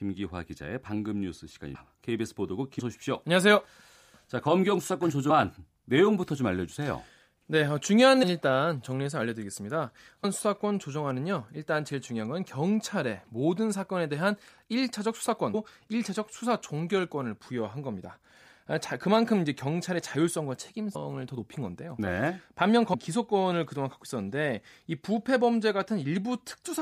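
Brief smeared blips at 1.74, 2.79, 5.29, 8.22, 10.23, 15.53, 20.94 and 22.93 s mark abrupt jumps forward in the speech, each losing between a tenth of a second and most of a second. These are compressed frames skipped: whole 26.1 ms frames go unplayed, and overlapping neighbours soften each join.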